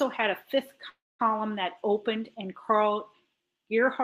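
At 0.89 s, right after "had a fifth", the speech stops and the last instant of sound hangs on as a brief fading buzz, then drops to silence until 1.21 s, when it resumes cleanly with "that opened and". This is a call audio freeze, likely from packets stalling so the jitter buffer ran dry. About 0.3 s is inserted with nothing lost, delaying everything after it. A spectrogram shows a smeared, decaying frozen frame, then a blank stretch of about 220 ms. The waveform goes flat there.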